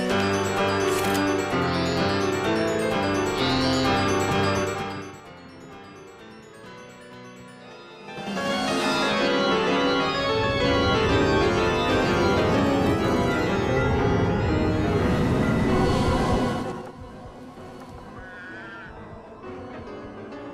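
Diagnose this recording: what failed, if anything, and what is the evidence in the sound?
Zipper noise in buffer-level gain processing at 4.55–5.29, 7.99–8.45 and 16.53–16.90 s: unsmoothed level moves of about 20 dB, stepped 3–4 dB roughly ten times a second, each step clicking.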